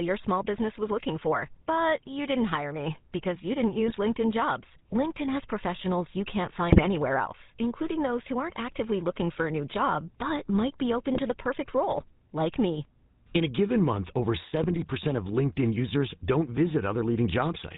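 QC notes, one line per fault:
Throughout, GSM full-rate codec: the speech is band-limited with nothing above 4 kHz, and it carries the buzzy, gravelly roughness of a vocal-tract model driven by regularly spaced pulses. Only every third excitation sample survives, so fine detail between pulses is lost and rebuilt coarsely. This is plainly audible across the clip and is consistent with the 13 kbit/s full-rate coder.
3.86 to 3.97 s, GSM bit errors: right after "me because you didn't", the speech breaks into a short squawk and gargle. Corrupted filter, pitch or gain parameters reach the decoder, which bends the spectrum or throws the level off for each affected frame. About 110 ms is hit, which fits roughly half a dozen 20 ms frames.
6.70 to 6.87 s, GSM bit errors: between "has professionals you can't" and "else including those who", a longer burst of pops and gargling, about 170 ms. It is the densest error stretch in the clip, at a bit error rate of about 2.4 percent. 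The damage spans several consecutive frames, so the distortion is sustained rather than a single click.
11.14 to 11.21 s, GSM bit errors: between "but might be open" and "the perfect role like", a brief squawk of about 70 ms, consistent with a few frames decoded from corrupted parameters.
14.63 to 14.79 s, GSM bit errors: about 160 ms of gargling and level jumps, again from damaged spectral and gain values. The error rate is about 1.7 percent.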